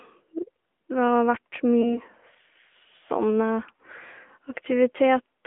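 This is a speech clip that's been through a mobile call path, and it sounds like it the whole way through. The AMR narrowband codec is plainly audible. Everything sits in a phone band of roughly 250 Hz to 3.4 kHz, so there's no air or sibilant detail up top, and the voice has that buzzy, synthetic edge you get when a vocal tract model and a handful of pulses stand in for the real waveform. The amount of grit fits a mid-rate mode around 10.2 kbps. Then there's a lost AMR speech frame from about 1.82 to 1.99 s. The gap sounds like about 20 ms, likely a single frame that failed its checksum over the radio link. The decoder fills it by repeating the previous pitch and spectral settings at reduced gain, so you hear a short dip or warble rather than a hard dropout, and the voice takes a moment to firm up again before the disturbance clears around 1.99 s.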